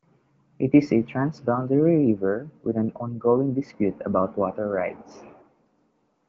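No technical faults can be heard anywhere in this recording.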